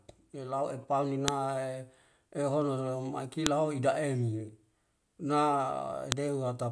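Sharp, loud clicks snap through the speech at 1.28, 3.46 and 6.12 s: file header played as audio, where leftover WAV header bytes at each joined piece play as samples.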